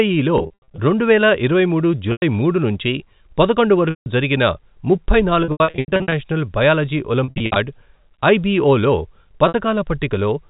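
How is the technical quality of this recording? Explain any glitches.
Technical quality is limited by repeated dropouts from packet loss with pitch repetition. They sit over narrowband telephone audio consistent with G.711 coding.

Losses occur at:
0.38 to 0.78 s, ending before "రెండువేల ఇరవై మూడు"
2.12 to 2.22 s
3.90 to 4.06 s, between "మూడు నుంచి పదకొండు" and "జరిగిన ముప్పై"
5.44 to 6.12 s, after "జరిగిన ముప్పై"
7.24 to 7.56 s
9.48 to 9.54 s

The receiver bridges each gap by repeating the last pitch period. Short gaps give a briefly held, buzzy tone, while longer ones fade into silence before the speech returns, and in places the losses are scattered in runs of up to 80 ms.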